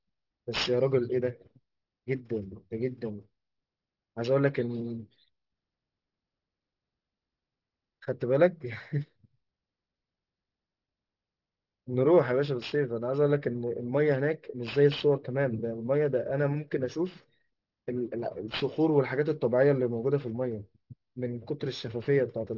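Aliasing runs through the whole clip. The audio was brought down to a much lower sample rate without first removing the content above the new limit, which points to a drop from 48 kHz to 12 kHz. Everything above 6 kHz folds back below it at unrelated frequencies, sitting around 20 dB under the speech. Sibilants come out gritty and metallic, and the spectrum stays dense right up to the 6 kHz edge.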